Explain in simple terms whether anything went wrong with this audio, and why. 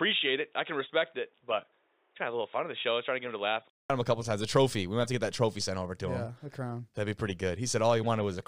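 For the first 3.9 seconds the speech sounds dull and boxy, with nothing above 3.8 kHz, a little quieter and with its own faint background noise. At 3.90 s, after a brief 0.2-second gap, it clears up just before "him a couple times." The likely cause is an input switched to a poorer device, such as a headset in call mode, which passes a narrower range of sound.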